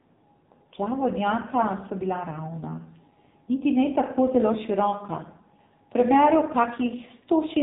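From start to finish the speech carries heavy AMR narrowband mobile codec damage: nothing passes above 3.8 kHz, and the voice is rebuilt from a vocal-tract model with sparse pulses, sounding buzzy and synthetic. That pulse-driven buzz, beyond simple dullness, separates it from plain band-limiting and suggests a low rate near 5.9 kbps.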